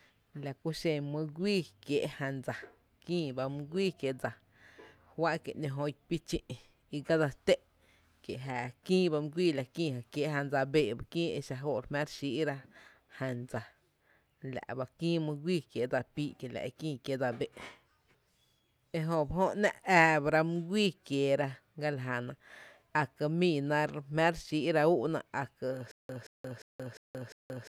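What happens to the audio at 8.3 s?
Nothing goes wrong at 8.3 s; the speech runs on intact through that moment, with no dropout, click or distortion.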